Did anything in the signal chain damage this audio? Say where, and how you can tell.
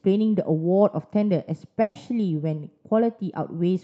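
Yes. The damage happened on the network. A burst of packet loss hits this speech clip from 1.81 to 1.97 s. About 140 ms of audio never arrived. The receiver's concealment filled that span by stretching the last sound it had and fading it, so you hear a held, smeared tail instead of new speech. There is no silence. Speech then picks up further along, with that 140 ms gone. The call codec's upper limit near 8 kHz is audible throughout.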